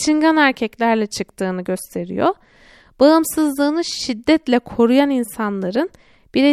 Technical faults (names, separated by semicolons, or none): none